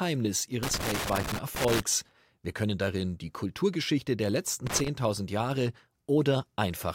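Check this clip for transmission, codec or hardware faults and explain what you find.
Loose connector crackle occurs twice in this speech, from 0.63 to 1.80 s and from 4.67 to 4.88 s. A worn contact intermittently breaks the signal, producing irregular scratchy bursts, seen as jagged waveform dropouts and scattered broadband vertical streaks on a spectrogram.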